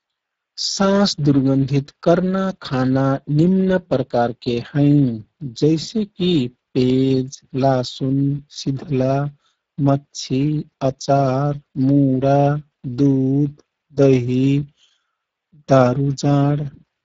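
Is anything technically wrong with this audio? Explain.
Yes. Speex codec damage runs through the whole speech clip. Too few bits for the excitation make it hoarse and noisy, which fits a low bitrate near 10 kbps. Nothing sounds above 7.8 kHz.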